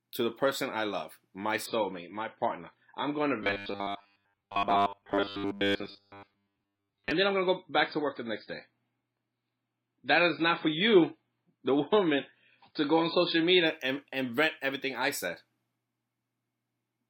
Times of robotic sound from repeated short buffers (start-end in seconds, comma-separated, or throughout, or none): 3.42-7.11